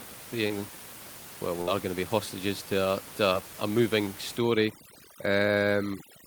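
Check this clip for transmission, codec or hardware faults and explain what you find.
Three kinds of fault are audible in this speech clip: packet loss twice concealed briefly, one longer packet-loss burst, and heavy-handed noise suppression at the end.

Short concealed packet loss, at 0.47 to 0.51 s and 3.33 to 3.42 s: each is a quick smear or wobble. About 20 ms never arrived, so the receiver extended the preceding sound and blended back in. The second one also stretches time slightly.

Burst of packet loss, 1.61 to 1.69 s: the sound hangs and fades briefly, then jumps ahead. About 60 ms went missing consecutively and was bridged by a decaying continuation of the last sound.

Overdone noise removal, 4.38 s to the end: the background drops and breaks up into twinkling specks. A suppressor is cutting bands near its noise estimate too aggressively, even though the room noise sat only about 16 dB below the speech.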